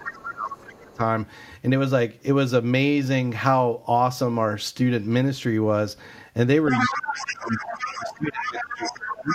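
Right from the start, 0.0 to 1.0 s, the speech gets squashed. That's speech suppressed in double talk, with dips of around 25 dB. The likely cause is an echo canceller that couldn't tell the talker apart from loudspeaker echo while both sides were active, so it turned everything down. Inside that stretch, from 0.05 to 0.29 s, you also catch the other side's voice leaking through. It's a short scrap about 10 dB under the speech, and it's likely residual echo the canceller didn't fully remove from the mic.

Things go wrong again later. From 6.68 s to the end, the other side's voice leaks through much more strongly, sitting only about 5 dB below the speech. This is likely the same incomplete echo cancellation, now letting through a long, fairly loud stretch. With both voices present at once, the suppression comes back. From 6.87 to 7.53 s the speech drops by about 20 dB, likely from the canceller clamping down during double talk. 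Then from 7.97 s to the end it sinks by around 25 dB, likely for the same reason, while the other side talks over them.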